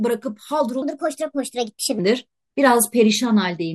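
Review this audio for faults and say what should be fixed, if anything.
From 0.82 to 1.99 s the speech runs as a section at the wrong speed, about 1.31 times too fast and roughly five semitones high. Unlike a pitch-shift fault, timing and pitch rise together. The likely cause is that this stretch was played against the wrong clock. To prevent it, check that every segment's sample rate matches the session clock before editing or export.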